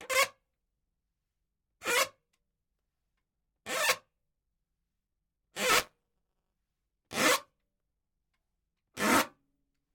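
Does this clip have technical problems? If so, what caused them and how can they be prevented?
Yes. Buffer tearing from 5.69 to 6.53 s adds a 188 Hz rattle, fitting a 256-sample buffer. About a tenth of each buffer replays audio from around 20 ms earlier. Keeping the writer safely ahead of the hardware read position, with enough buffering headroom, prevents this.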